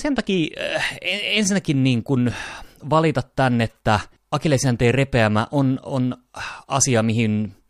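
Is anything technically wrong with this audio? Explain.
No, nothing here sounds technically wrong to me; this speech recording comes across just as it should from beginning to end.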